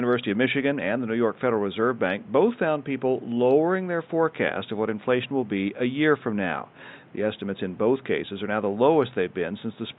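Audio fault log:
No faults found in the speech; the room noise sits about 29 dB below it and belongs to the recording.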